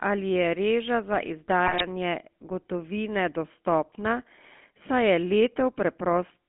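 GSM full-rate codec runs through the whole speech clip. The sound is squeezed into a telephone band of roughly 200 Hz to 3.4 kHz, and the vocal tract is rebuilt from a filter driven by sparse, regularly spaced pulses, which fits a 13 kbps full-rate stream. Because so little of the excitation survives, the voice takes on a plainly audible buzzy, gravelly roughness, and everything above the band is simply gone.

GSM bit errors strike from 1.64 to 1.85 s, just after "reža za". Corrupted bits reached the decoder, so the filter, pitch and gain values it rebuilt for each short frame were wrong. For about a fifth of a second the spectrum lurches and the level jumps from frame to frame, and the audio breaks into squawks, pops and gargling. The damage spans roughly ten consecutive frames, at an error rate of around 2 percent.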